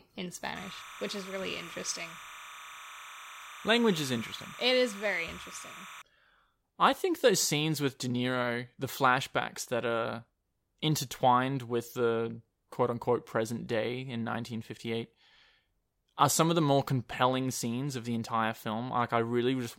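From 0.55 to 6.02 s, timecode bleed sits behind the speech. Linear timecode from a nearby track or cable leaks in. Its square wave flips between roughly 1 and 2 kHz, which fits 30 fps code. It sounds like a steady chirping warble, about 15 dB below the speech.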